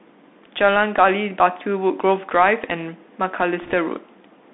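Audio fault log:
Throughout: Bluetooth CVSD headset codec. The speech is boxed into a narrow telephone band of about 200 Hz to 3.6 kHz, with a granular hiss underneath, scratchy s sounds and roughness on loud bright passages. The one-bit up/down coder's adapting step can't keep pace there, which fits a 64 kbps CVSD stream.
3.62 to 3.74 s: bit errors on a Bluetooth voice link. A brief rushing crackle spreads over the speech, without sharp clicks. Flipped bits each nudge the CVSD waveform by an amount that grows with the speech level and fade out, and the density of the noise suggests an error rate around one percent.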